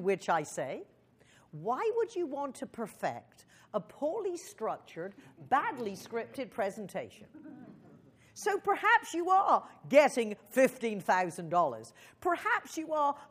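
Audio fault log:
No faults are audible anywhere in this clip.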